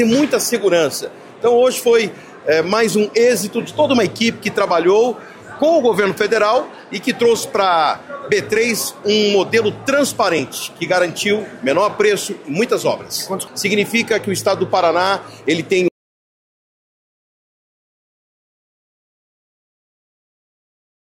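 At 15.88 s the sound cuts off mid-flow into total silence that lasts to the end, with no room tone. This is an audio dropout to silence, likely from a lost input while silence kept being written. The waveform flattens to a line, and the spectrogram goes blank.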